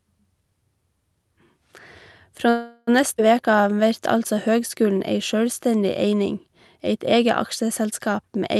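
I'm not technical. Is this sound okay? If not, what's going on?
No. A call audio freeze happens from 2.49 to 2.89 s: the sound stalls for about 0.4 s and fades into a drawn-out buzz before carrying on where it stopped. The likely cause is delayed network packets leaving the receiver's small waiting buffer empty, so it improvised.

A skip ahead happens at 3.17 to 3.20 s: roughly a tenth of a second of audio is dropped and playback jumps straight to what follows, so a small piece is simply missing.

A jitter buffer slow-down runs from 3.43 to 4.36 s, just before "høgskulen ei sjølvstendig". To rebuild its reserve, the receiver repeated tiny slices of the sound, adding 91 ms. That plays the stretch at about 91% speed, drawn out but at the same pitch.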